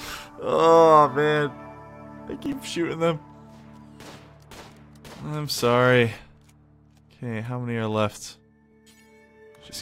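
Processor overload crackle runs from 2.34 to 2.53 s. For about 0.19 s the processor falls behind and misses a run of buffer deadlines. The short gaps point to buffers of around a millisecond and a half, with a handful missed. Each missed buffer is simply skipped rather than filled with stale audio, so the sound jumps forward with a hard edge each time. Together these skips are heard as a brief gritty crackle riding on the sound, and it clears once the load eases.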